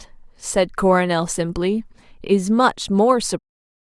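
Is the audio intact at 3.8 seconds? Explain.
Yes, the speech is intact at 3.8 seconds, where it sits within a smooth fade-out that begins around 3.5 s and lowers the level gradually, with no click or hard edge.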